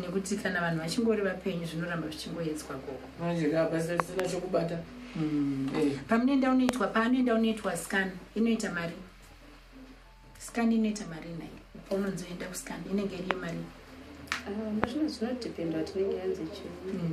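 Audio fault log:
4.00–4.22 s, 6.69 s, 13.31 s, 14.84 s: loud pop. The first is a double pop and the others are single, each roughly 25 dB above the sound, which carries on underneath. This is likely a voltage pulse, such as a switch, static or driver glitch, added to the signal and shaped downstream.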